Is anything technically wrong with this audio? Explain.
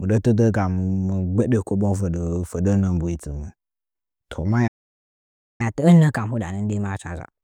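Yes, there are two faults. From 4.67 to 5.61 s the speech cuts to silence for about 0.92 s, a playback stall, likely the player running out of buffered data or its thread being blocked. From 5.61 to 7.43 s the speech runs 1.15 times too fast and sits about two semitones sharp. This is catch-up at higher speed: the player resamples its backlog to regain the lost time.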